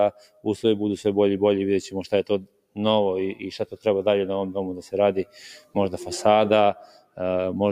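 A noise suppressor applied to music or sounds stays on throughout, mistaking steady, sustained material for noise and swinging the level by around 10 dB. Attacks pass while held parts thin, unlike a gate, which shuts fully. Sound cut by the noise suppressor dips hardest at 0.12–0.46 s (about 15 dB), 2.41–2.77 s (about 18 dB), 3.64–3.86 s (about 13 dB), 5.55–5.76 s (about 16 dB) and 6.77–7.2 s (about 16 dB). These are brief sags in sustains, not clean dropouts.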